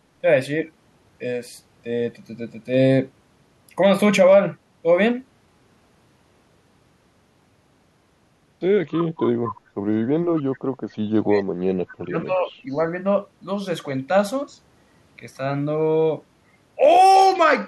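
A speech recording with echo leak at 8.89–9.07 s, 9.44–9.53 s and 10.36–10.43 s: brief delayed copies trailing by 228 ms, roughly 15 dB below the speech, the last closer to 25 dB down, likely from an echo canceller missing loudspeaker pickup. From 11.21 to 12.5 s, speech suppressed in double talk affects the talker for about a second in total, dipping by as much as around 35 dB.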